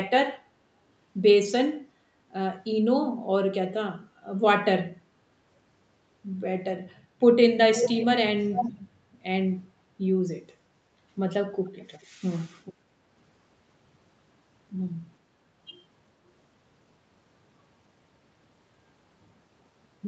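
A delayed copy of the speech, about 0.43 s behind, surfaces at 7.75–8.05 s nearly as loud as the original, again at 8.54–8.72 s, then faintly at 11.64 s, 12.01 s and 12.65 s. This is echo leak, likely from a far-end loudspeaker whose echo canceller let its microphone pickup return.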